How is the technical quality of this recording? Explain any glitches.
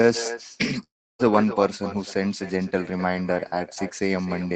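The quality is compromised by two glitches. The speech carries an echo throughout, and a gap breaks the audio early on.

Echo with no canceller, throughout: the far end's loudspeaker feeds its microphone unchecked, so every phrase returns roughly 0.3 s later, about 13 dB quieter and thin.

Long network dropout, 0.83 to 1.22 s: a likely stretch of lost packets; the receiver stretches the last sound into a fading buzz, then near-silence, before speech resumes with that portion missing.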